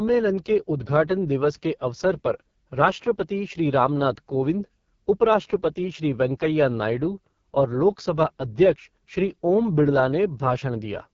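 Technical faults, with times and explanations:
Throughout, AMR wideband (HD Voice) codec: the speech is rough and raspy, with nothing above 7.4 kHz. This points to the lowest AMR-WB rate, around 6.6 kbit/s, where the pulse-driven vocal tract model is too coarse and the top band is shaped noise.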